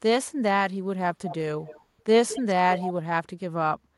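Four short bursts of echo leak turn up in this speech, at 1.14–1.36 s, 1.66–1.81 s, 2.28–2.42 s and 2.75–2.93 s. Each is a faint copy of the talker trailing about 221 ms behind, somewhere around 10 to 20 dB down. It's most likely a far-end loudspeaker whose echo canceller isn't fully catching its own mic pickup.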